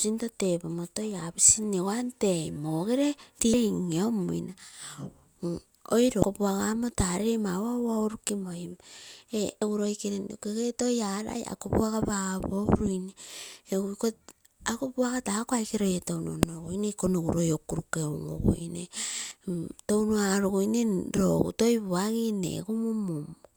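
Damaged data in a compressed stream at 3.54 s (just before "in inamuina"), 6.22–6.24 s (before "puaga kamo"), 9.62, 16.43 and 19.28–19.32 s: corrupted frames make the decoder misread and lose sync, leaving brief chirps or blips in the speech.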